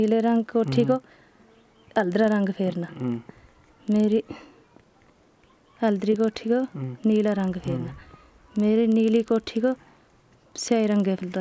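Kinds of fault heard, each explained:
Resampler restarted on every block: throughout, conversion consistent with 44.1 kHz to 16 kHz runs afresh on each 40 ms block, so every block edge lacks its true neighbouring samples and carries a small error, heard as a 25 Hz buzz present only with signal.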